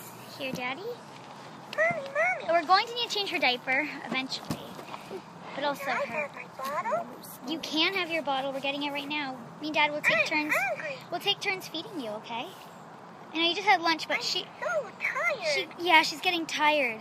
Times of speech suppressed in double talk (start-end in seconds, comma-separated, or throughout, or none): none